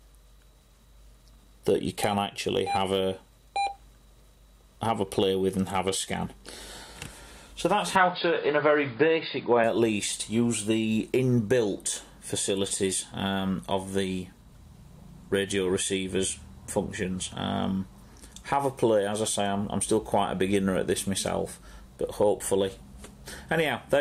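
From 7.96 to 9.64 s the sound turns dull and boxy, with nothing above 4.9 kHz. There is no gap at the change and no clear level jump. A faint new noise floor sits far below. The likely cause is an input switched to a poorer device.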